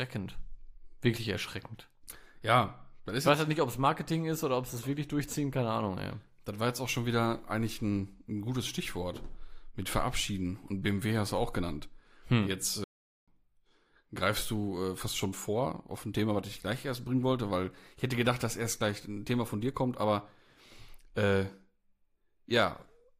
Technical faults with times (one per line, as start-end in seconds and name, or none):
12.84-13.28 playback stall